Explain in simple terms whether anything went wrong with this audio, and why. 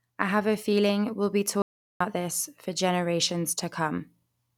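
At 1.62 seconds the speech suddenly stops, and for about 0.38 seconds, until 2.00 seconds, there is total silence. Even the background sound of the room vanishes before the talking picks up again mid-flow. This is an audio dropout to silence. The likely cause is that the recording briefly lost its input, through a loose connection, a failed link or an accidental mute, and kept writing pure silence. Whatever was said in that gap is gone.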